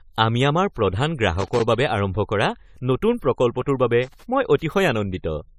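Generation loss runs through the whole of this speech recording. It sounds swirly, smeared and hollow, with blurred attacks and nothing above 18.4 kHz. That points to likely repeated AAC-LC re-encoding around 64 kbit/s, perhaps seven passes, with each fresh frame grid compounding the quantisation noise. Loose connector crackle breaks in from 1.39 to 1.62 s and again from 4.03 to 4.24 s as irregular scratchy bursts, where a worn contact rapidly makes and breaks, chopping the signal.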